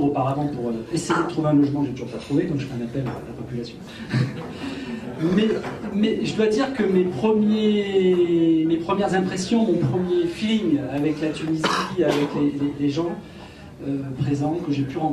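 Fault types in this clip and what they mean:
No technical faults can be heard in this recording.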